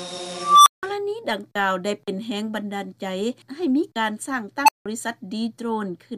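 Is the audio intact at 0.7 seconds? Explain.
No. At 0.7 seconds the clip is inside an unstable filter fault running from 0.35 to 0.83 s. A recursive filter with bad coefficients feeds its own output back with gain above unity, so a tone around 1 kHz swells over about 314 ms, driving the signal into clipping until the arithmetic overflows. The sound is a squeal rising to a very loud level, followed by about 168 ms of silence before the filter resets.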